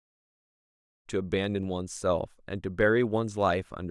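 Nothing to flag in this speech; the fade-in from about 1 s up to full level at 1.09 s is smooth, with no click or hard edge.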